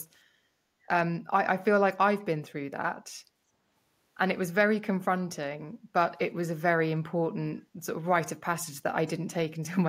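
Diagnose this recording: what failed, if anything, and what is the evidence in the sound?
Background gated by the echo canceller, 5.79 to 5.92 s, in the call-processing stage. The room sound behind the speech dips by about 8 dB for roughly 150 ms, then recovers. The canceller, reacting to far-end loudspeaker output, clamped the microphone path and released it moments later.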